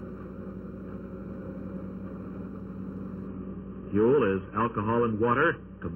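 One channel of the audio arrives late by a fraction of a millisecond, around 0.7 ms, and the two channels are folded to mono, so this channel delay sets up comb filtering throughout. Content shared by both sides cancels at evenly spaced frequencies, with the first deep notch near 700 Hz and further ones repeating above it, which leaves the sound hollow and phasey from start to finish. From 3.28 s to the end, the adaptive stream drops to a lower bitrate, with quality falling abruptly and no gap in playback. From that point nothing is heard above 3.3 kHz, so the top end goes muffled while coding artefacts grow more prominent. The sudden loss of treble points to a switch from a reasonably high AAC rate down to something in the region of 16 kbit/s.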